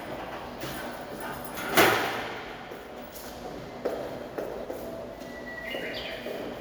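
At 4.61 to 4.66 s there is a brief glitch: damaged data in a compressed stream. Corrupted bytes made the decoder misread frames and hunt for the next header. Unlike a plain dropout, the decoder loses sync and then resumes at a later frame.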